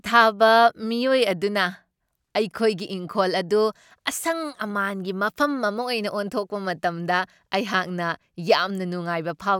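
No technical faults can be heard anywhere in this speech recording. There is no event to place in time and nothing in the sound that points to a problem in how it was captured or delivered.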